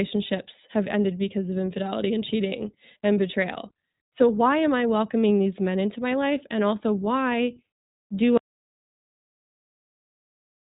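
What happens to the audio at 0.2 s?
At 0.2 s the speech is already passing through the iLBC codec, which is present for the whole clip. The codec rebuilds each short frame's excitation independently of the previous one, and the result sounds like 20 ms frames at around 15.2 kbps. Everything above 3.8 kHz is gone, leaving a muffled, telephone-band sound, and the independent frame coding gives the speech a plainly audible rough, slightly synthetic texture.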